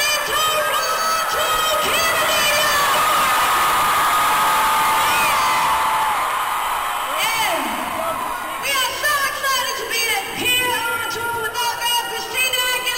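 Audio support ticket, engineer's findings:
Channel delay (comb filtering), 5.33–6.42 s. Slight dulling of the top end, faint loss of air. Likely cause: one channel lagging the other by about one sample (around 0.02 ms) before a mono sum. Common content cancels near 20 kHz, so only the highest frequencies are notched.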